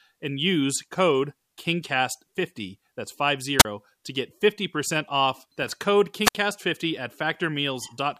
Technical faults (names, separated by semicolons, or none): wireless microphone squelch dropout